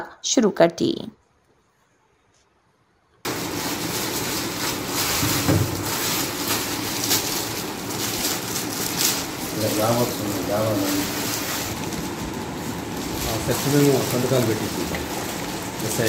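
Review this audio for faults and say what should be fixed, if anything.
Nothing to fix: no audible faults were found anywhere in the clip.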